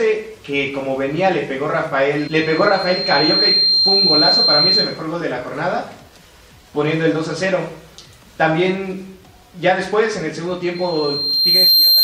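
Loudspeaker feedback squeal at 2.18–5.05 s and from 10.75 s on: a 4.2 kHz tone that swells over about 1.5 s the first time and about a second the second time, louder the second time, unlike a steady whistle.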